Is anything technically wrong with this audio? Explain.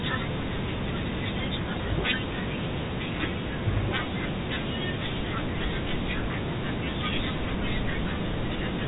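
No technical faults are audible.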